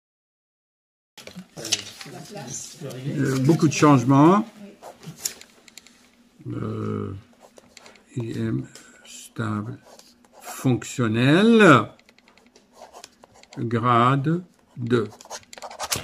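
The capture or stream began late, a cut-off start: nothing was recorded until partway into an ongoing sound, so the first 1.18 s are digital silence and the audio then enters abruptly at 1.18 s, mid-sound, with no natural attack or fade-in.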